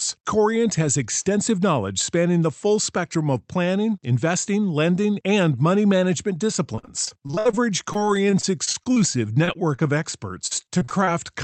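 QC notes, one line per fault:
6.75–7.55 s, 7.93–8.98 s and 10.47–11.09 s: repeated packet loss (robotic sound). The first burst starts right after "lending and money management". Audio drops out in quick succession: 10 gaps, then 10, then 6. Each hole is patched by stretching the last sound forward. About a third of the first span is patched, with gaps up to 61 ms. The later spans are shorter-gapped. The chained patches give a choppy texture over the Opus call path's 8 kHz band limit.
9.45–9.49 s, 9.53–9.56 s and 9.76–9.83 s: short concealed packet loss. In each spot about 20 ms of audio never arrived in time. The receiver bridged the hole by extending the preceding sound, then blended back into real audio. Each sounds like a brief smear or wobble. The last one also stretches timing by a few milliseconds.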